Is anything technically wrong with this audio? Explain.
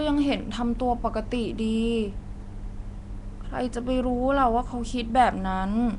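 Yes. Throughout the speech there is a coarse, hiss-edged fringe and a blurred, submerged tone, likely from Nellymoser compression. The codec gives every sample a fixed two bits, so faint bands get none and are refilled with noise. That noise fill, not mere dullness, separates it from a plain low-pass, though nothing sounds above 10.6 kHz, which fits a rate near 44 kbps.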